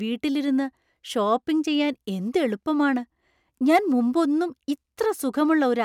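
No technical faults are audible.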